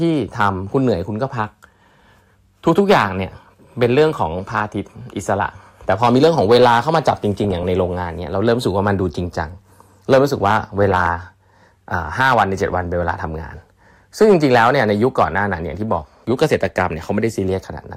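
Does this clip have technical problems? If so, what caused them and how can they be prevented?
Yes, two things stand out. First, there's hard clipping running through the whole speech clip. The level is pushed roughly 5 dB past what the chain can pass, so the loudest peaks get sliced flat. Only a small share of the audio, on the order of one percent, actually hits the ceiling, so what you hear is a gritty crackle on the louder moments rather than constant fuzz. Those flattened tops add high harmonics that don't belong to the sound. To prevent it, set the gain so peaks leave a few dB of headroom before any converter or fixed-point stage.

Second, there are three short patches of DAB burbling, at 7.44 to 7.63 s, 10.83 to 11.08 s, and 16.08 to 16.40 s. Each one puts short blips of noise in single sub-bands over the speech. That's weak reception letting bit errors slip past the error correction into the MP2 data. 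With an error rate of a fraction of a percent, individual samples come out wrong and turn into those noise blips. The last patch is the longest, which suggests a somewhat longer dropout in signal quality. To prevent it, improve reception with a better antenna, a better position or a stronger multiplex, or record from a wired or IP source.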